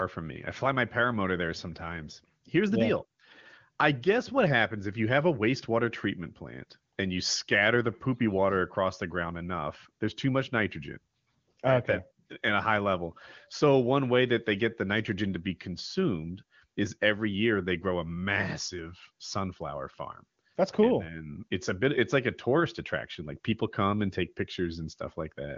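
Nothing stood out on listening to this speech.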